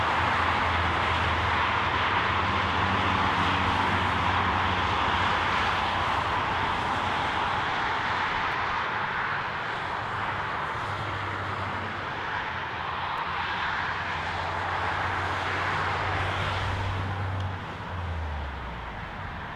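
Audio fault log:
8.52 s and 13.17 s, chunks out of order: a chunk of about 5.8 ms plays one chunk late, after the one meant to follow it. Nothing is lost, but three hard joins form. Each is heard as a brief jumbled moment in the sound.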